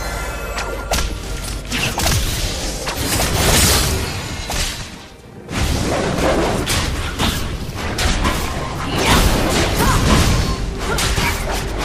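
Nothing here calls for comment, since there isn't a single technical fault to point to anywhere in the clip.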